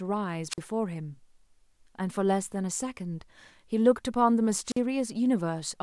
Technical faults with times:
0.49-0.58 wireless microphone squelch dropout
4.65-4.79 wireless microphone squelch dropout

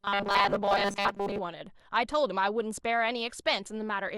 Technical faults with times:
0.01-1.40 robotic sound from repeated short buffers

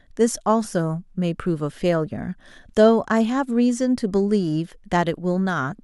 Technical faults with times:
none

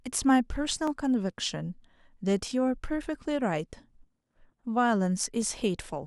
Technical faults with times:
0.87-5.42 clock drift buffer slips

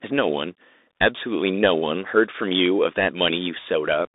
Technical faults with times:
0.00-4.15 Bluetooth CVSD headset codec

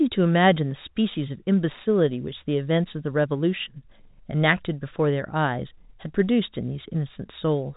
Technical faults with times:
none

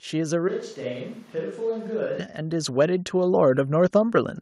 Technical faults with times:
0.48-2.18 switch to a distant microphone
2.38-4.36 automatic gain rising

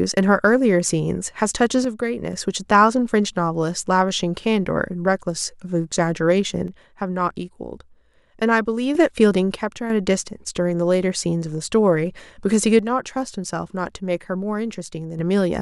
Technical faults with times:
1.85-2.33 one channel drops out
6.68-8.95 one channel drops out
9.55-9.90 one channel drops out
12.79-15.19 one channel drops out

